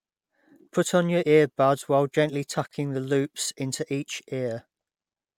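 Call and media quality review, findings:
Gap at a join of encoded pieces, 2.67 to 2.71 s. Segments encoded separately and concatenated untrimmed; encoder start delay and last-frame padding both survive the splice. Result: a 38 ms gap inside continuous speech, abrupt edges smeared by the codec, then the speech resumes exactly where it stopped. Probable component: segmenting/concatenation stage ahead of delivery.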